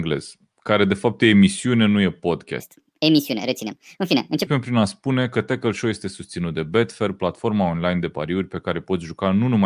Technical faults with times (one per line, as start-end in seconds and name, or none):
2.60-4.47 wrong sample rate